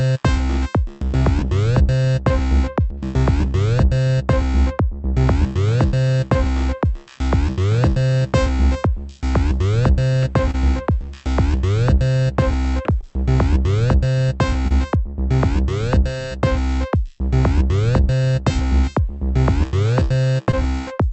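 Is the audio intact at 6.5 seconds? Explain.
No. At 6.5 seconds, clock drift between sender and receiver is present: the sender's clock runs about 1% slow, so the receiver's jitter buffer keeps draining. Repeated timing corrections run from 0.04 to 19.26 s: the receiver repeats short pieces to stay in step, adding roughly a tenth of a second overall.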